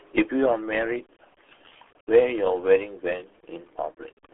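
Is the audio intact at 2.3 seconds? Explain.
No. At 2.3 s the speech runs through the RealAudio 14.4 codec. Nothing passes above about 3.8 kHz, and heavy coding damage makes it muffled and gargly, which fits a low-rate dial-up speech coder rather than a simple low-pass filter. A sudden gain jump is also in effect from 0.46 s to the end, holding the level about 6 dB lower. Speech and background noise drop together, unlike a fade, most likely because a gain setting changed without a ramp.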